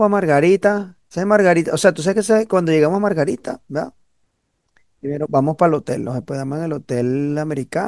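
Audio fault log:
No faults are audible anywhere in this speech recording.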